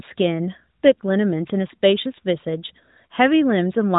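Nothing in this speech recording stood out as a technical problem on listening.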